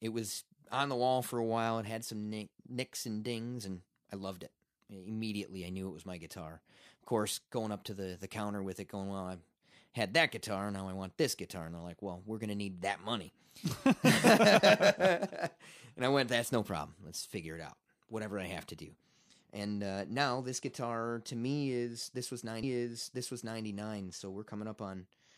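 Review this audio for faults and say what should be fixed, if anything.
A stream segment was repeated: the player fetched or queued the same chunk of the stream twice, so after "me is this was" the speech jumps back and replays about a second of itself, from 22.62 s to 23.62 s. That adds 1.0 s to the running time, and a small blip marks the point where playback skips back to the start of the duplicated stretch. To prevent it, have the player track segment sequence numbers and drop any segment it has already queued.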